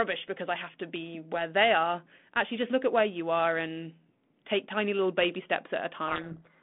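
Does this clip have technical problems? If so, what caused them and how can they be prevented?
Yes. A codec payload misread starts at 6.08 s and runs to the end of the clip at 6.62 s, burying the speech in harsh distortion. The G.726 code words are arriving with their bit order reversed relative to what the decoder expects, so each sample is rebuilt from the wrong difference value and the adaptive predictor is driven off course, unlike the normally decoded 32 kbit/s telephone-band audio before it, which shows only light coding damage. Prevention: make sender and receiver agree explicitly on the G.726 packing order during call setup.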